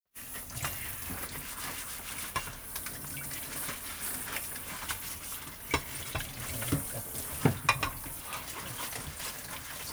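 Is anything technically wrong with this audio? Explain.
No, nothing technically wrong can be heard in this audio; the signal stays steady and intact throughout, with no audible disturbance at any point.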